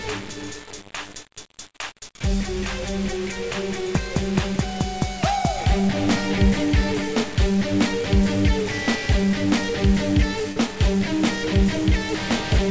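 Heavy grainy distortion runs through the whole audio, tracking the signal's level; the likely cause is low bit depth without dither, roughly 5-bit rounding, leaving a noise floor only about 15 dB under the signal, visible on a spectrogram as broadband grit tied to each sound and on a waveform as coarse stair-steps. At 10.52 to 10.58 s a short concealed packet loss smears the sound for about 40 ms, where the receiver extended the preceding audio; a spectrogram shows a brief blurred, repeated stretch there. The call path's band limit, consistent with a wideband codec such as G.722, leaves the spectrogram empty above 8 kHz.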